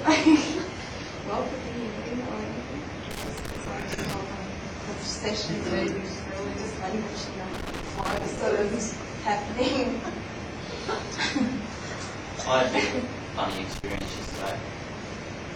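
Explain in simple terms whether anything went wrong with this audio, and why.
Loose connector crackle at 3.1 to 4.1, 7.5 to 8.4 and 13.5 to 14.5 seconds: a worn or dirty plug kept losing contact, chopping the sound into scratchy pops.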